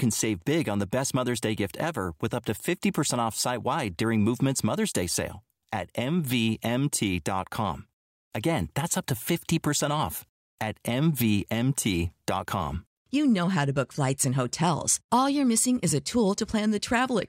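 Listening to this speech recording, nothing technical stood out as wrong at any point.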